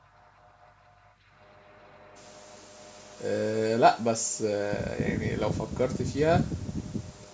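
Echo leak at 0.00 to 0.28 s, 0.59 to 1.16 s and 2.78 to 3.25 s: a faint copy of the speech returns about 0.42 s late, well below the direct sound. Likely an echo canceller on a loudspeaker end let part of its microphone pickup through.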